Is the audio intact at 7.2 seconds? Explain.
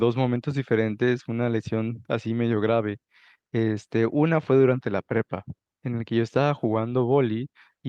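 Yes, the speech at 7.2 seconds plays through intact, with no dropout, click, distortion or other fault at that moment.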